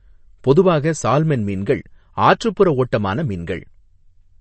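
From start to finish the speech sounds watery and swirly, with the treble missing entirely above 8.3 kHz. That is MP3 compression, and the damage is plainly audible. The likely cause is an encoder starved of bits, at a rate that fits roughly 34 kbps. It removed the upper band at a fixed cut-off and dropped the weaker frequency lines, which switch on and off from one frame to the next and produce the swirling texture.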